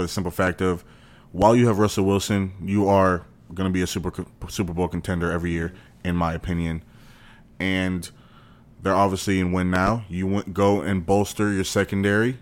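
Three loud pops: at 0.47 s after "the simple", at 1.42 s before "you have", and a double pop from 9.76 to 9.90 s after "they're obviously in win". They're about 10 to 15 dB above the speech, which carries on underneath. Likely a voltage spike from a plug, switch or static.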